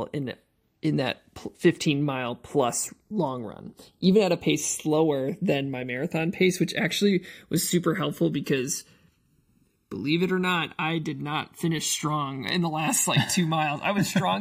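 Speech recording where the two channels are drifting apart the whole way through, from clocks about 100 ppm off, sliding to roughly a millisecond, so mono sounds like slow flanging.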